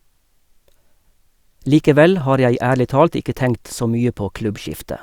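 Speech, with nothing technically wrong with it.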